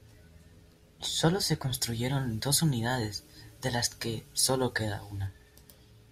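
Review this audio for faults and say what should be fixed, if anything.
From 1.75 to 5.27 s the speech turns thin and bright, with harsh sibilance. This is pre-emphasis left on. The treble was lifted before storage, and the matching de-emphasis never followed. The top end stands about 8 dB higher at 10 kHz than at 1 kHz. That tilt fits the CD 50/15 µs curve. Apply the complementary de-emphasis over that span to restore the balance. To prevent it, check the emphasis flag on playback and pair every pre-emphasis stage with its de-emphasis.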